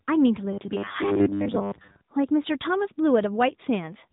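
From start to finish the speech carries AMR narrowband mobile codec damage: the 8 kHz phone-band model leaves nothing above 3.8 kHz, a hard ceiling on the spectrogram, and rebuilds the voice from sparse pulses, giving a plainly buzzy, synthetic tone that fits a mid-range rate near 10 kbps.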